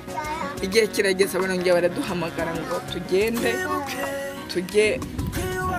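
Nothing in the signal points to a technical fault at any point in the recording.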